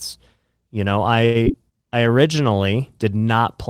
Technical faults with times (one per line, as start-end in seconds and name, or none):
1.25-1.37 short stall from a late packet
1.45-1.48 short concealed packet loss